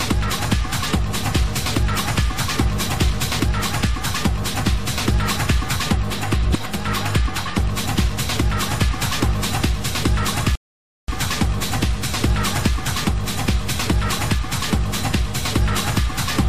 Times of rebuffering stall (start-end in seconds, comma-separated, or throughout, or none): 10.55-11.08